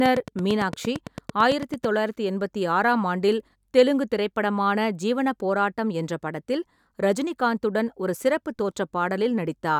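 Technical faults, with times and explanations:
0.06 to 1.85 s, train of clicks: a steady ticking sits over the opening of the speech, about 9 clicks per second at a regular pace, roughly fifteen in all, each with much the same shape and peaking about 10 dB above the speech, so they stand out clearly before "தொள்ளாயிரத்து எண்பத்தி ஆறாம் ஆண்டில்". Such an evenly spaced run of like pulses is likely interference from nearby equipment or a faulty connection or power supply.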